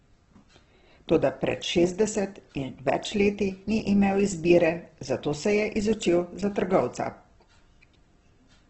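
Throughout the speech the sound is grainy and rough, with noisy texture in place of clean tones and nothing above 8.1 kHz. The likely cause is heavy Opus compression in CELT mode, fitting about 12 kbps. A spectrogram shows a hard 8.1 kHz ceiling over noise-filled bands.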